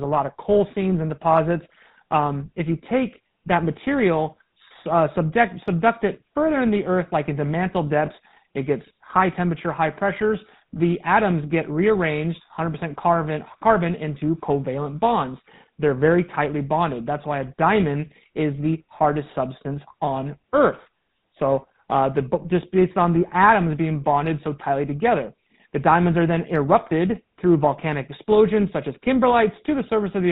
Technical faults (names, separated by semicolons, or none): GSM full-rate codec; lost GSM frames